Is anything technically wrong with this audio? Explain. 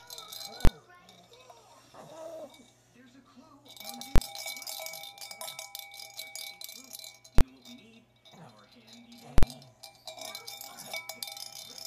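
Yes. The audio has four loud bangs from invalid numbers at full scale. They fall at 0.65, 4.16, 7.38 and 9.38 s. A calculation has produced infinite or invalid values, and these have been pinned to the largest possible sample value. The output sits flat at one extreme value, far beyond the audio's peaks, for a whole block. The first three last about 23 ms, which fits a 1024-sample block. The last lasts about 46 ms. Each is so short that it is heard as one sharp bang.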